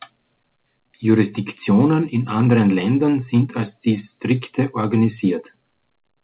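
No technical faults turn up in this speech, which comes over a call path coded as G.711 A-law with nothing above 4 kHz.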